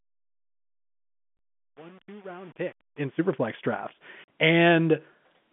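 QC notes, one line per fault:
1.37 s and 4.24 s: packet loss filled with silence. Two short holes cut into the speech. The first lasts 20 ms. The second lasts 40 ms and ends at 4.28 s. The receiver had nothing to play for those stretches, so it put out silence. The sound stops dead and then restarts. Both gaps are multiples of 10 ms, which fits 10 ms packets.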